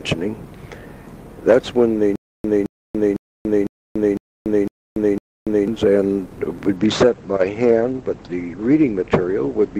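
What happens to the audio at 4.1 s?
Stutter with silent gaps runs from 2.16 to 5.68 s, covering the 4.1 s mark. The same 216 ms burst repeats seven times, each followed by 288 ms of dead silence, a steady 504 ms cycle, likely from a stalled stream replaying its last fragment and then running empty.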